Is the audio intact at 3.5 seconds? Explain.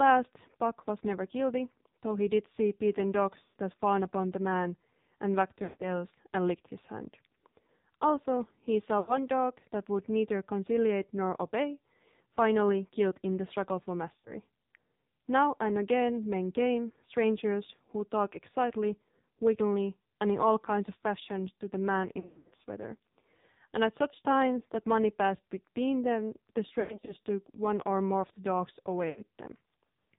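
No. From 3.44 to 3.58 s, lost AMR speech frames break the sound. A stretch of about 120 ms failed to decode, which fits six 20 ms frames in a row. The decoder filled the gap by repeating the last good pitch and vocal tract settings at falling gain. So the sound smears and stretches out, then sinks toward silence before the signal returns. Just after it, the sound comes back thin and rough for a moment.

At the same moment, as across the whole clip, the AMR narrowband mobile codec is also audible. Everything above 4 kHz is missing, which gives a dull, boxed-in tone. The damage is heavy. The buzzy, synthetic texture points to one of the lowest AMR modes, near 5.9 kbps. At that rate the codec rebuilds the voice from very few pulses per frame. That is why the sound sounds coarse and artificial.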